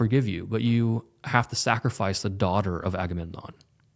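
Speech recording, with no technical faults audible anywhere in it.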